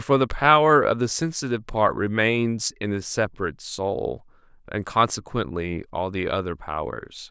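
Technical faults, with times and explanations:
Nothing in the speech stood out as a technical problem on listening.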